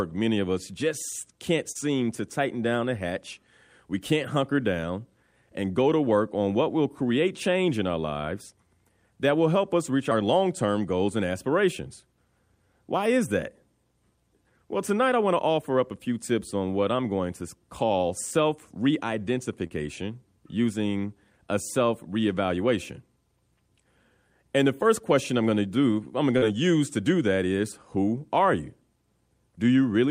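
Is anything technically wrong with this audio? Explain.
Yes. Short concealed packet loss occurs at 1.71, 19.67 and 26.38 s: about 40 ms of speech went missing and was patched by extending the preceding sound. This produces a brief smear rather than the silent gap of a plain dropout.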